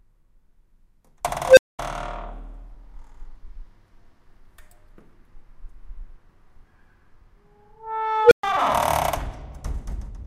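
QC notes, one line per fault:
1.45–1.79 s, unstable filter: a tone around 500 Hz swells over 0.12 s into clipping, then numeric overflow leaves 0.22 s of dead silence. Unlike feedback howl, it collapses rather than sustaining.
8.23–8.43 s, unstable filter: the same tone around 500 Hz runs away faster, over 0.08 s, clips, then cuts to 0.12 s of silence until the filter resets.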